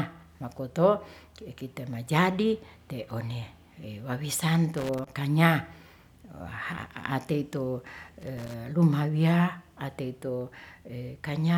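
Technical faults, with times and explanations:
4.78 to 5.09 s and 8.21 to 8.54 s, loose connector crackle. Two irregular bursts of scratchy crackle break into the speech, each lasting about a third of a second. A worn or dirty contact is making and breaking as it shifts. This chops the signal on and off, and any DC on the line turns each break into a pop.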